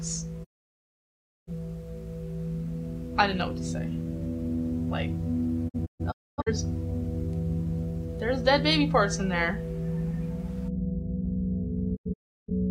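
Digital broadcast dropouts hit at 0.43 to 1.51 s, 5.68 to 6.52 s and 11.95 to 12.5 s. The receiver mutes on failed frames with roughly 20 ms fades, so the waveform shows flat gaps. The later two are scattered holes, and the spectrogram shows sharp vertical blank bands.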